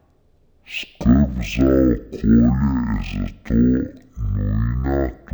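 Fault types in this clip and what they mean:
Stereo read as mono: left and right samples get taken as one channel, so this speech drags at half speed and sits a full octave low.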